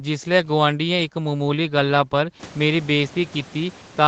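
No technical faults; the 8 kHz band limit from the Opus call path and the room noise that rises by about 24 dB around 2.5 s are normal parts of the recording and transmission chain.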